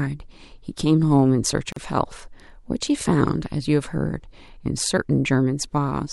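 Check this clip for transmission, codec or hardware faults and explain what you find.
One fault is present: a gap at a join of encoded pieces, from 1.72 to 1.76 s. Two separately encoded sections were spliced without trimming the encoder's start-up delay and final-frame padding, so a 40 ms gap cuts into the speech with smeared edges before the sound resumes where it stopped.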